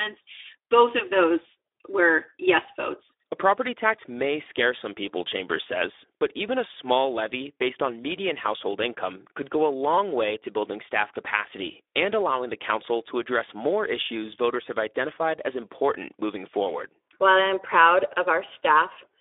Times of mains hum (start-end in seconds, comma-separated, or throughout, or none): none